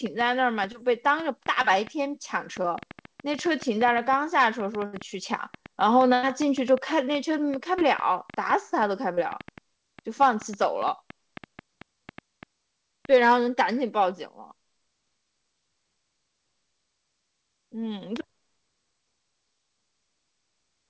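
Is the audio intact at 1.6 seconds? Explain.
No. A short concealed packet loss runs from 1.62 to 1.66 s. About 20 ms of audio never arrived, and the receiver filled the gap by extending the preceding sound before blending back in. It is heard as a brief smear or wobble. On a spectrogram it shows as a sliver where the preceding sound is continued, and on the waveform as a short extended stretch.

A train of clicks also covers this moment. It runs from 0.06 to 13.06 s as roughly 70 irregularly spaced pops, about five per second, peaking about 5 dB above the speech. It likely comes from equipment interference or a faulty connection or power supply. On a spectrogram the clicks appear as thin vertical lines, and on the waveform as sharp spikes.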